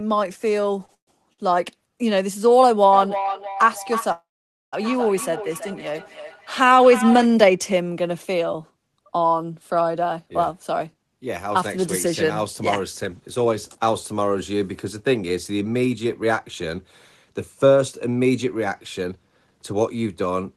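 At 0.85 s a packet arrived late and the jitter buffer ran dry for a moment. This is a short stall from a late packet. The receiver held the last sound for about 29 ms until the data turned up, then resumed where it had stopped. The same thing happens at 1.33 s, this time for about 51 ms. In both places the sound is briefly drawn out with a faint buzzy smear, and nothing is lost.

Between 0.94 and 1.09 s there is a call audio freeze, likely caused by packets being held up in transit so that the buffer emptied. The last sound carries on as a fading buzz for a few tens of milliseconds. It then drops to silence for about 100 ms before the audio picks up from the same point. A second freeze runs from 4.12 to 4.75 s. Here a fading tail gives way to roughly half a second of silence, about 490 ms, again with nothing missing.

From 2.93 to 7.32 s, feedback echo between two devices sets in. A second device in the same room is replaying the call. 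Its output leaks into the first microphone, and neither echo canceller can remove the other device's playback. Each phrase comes back about every third of a second, thinner and more ringing on each pass. The loudest repeats reach about 7 dB below the direct speech.

From 10.02 s to 20.27 s, a jitter buffer speed-up takes hold. The buffer had built up more audio than its target. To shrink the delay, the receiver cut many tiny pitch-period slices, removing about 0.7 s in total. The speech runs at about 106% of normal speed with unchanged pitch and sounds slightly rushed. Throughout the clip, the Opus call path audibly limits the top end to about 12 kHz, which fits a bitrate around 20 kbps.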